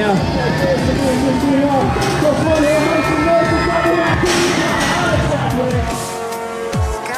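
No technical faults can be heard anywhere in the recording. Nothing in the sound points to a dropout, distortion or other playback or transmission problem.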